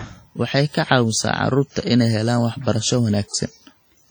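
Throughout the speech, heavy transform-codec damage is audible: smeared, ringing consonants and a washy hiss that swells and fades with the signal. This is likely WMA compression, with long blocks spreading quantisation noise and weak components zeroed, consistent with roughly 32 kbps.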